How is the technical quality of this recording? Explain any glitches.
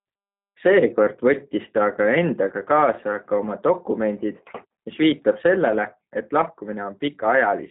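The technical quality is limited by one fault that runs through the whole recording. The speech has passed through a narrowband low-bitrate voice codec, and the damage is plainly audible.

The G.729 codec artefacts are present from start to finish. The sound fits G.729A at 8 kbit/s. This codec does not store the waveform. It rebuilds the speech from a vocal tract filter, a pitch predictor and a few pulses per half-frame. Nothing above 4 kHz survives. The speech sounds muffled, rough and somewhat synthetic.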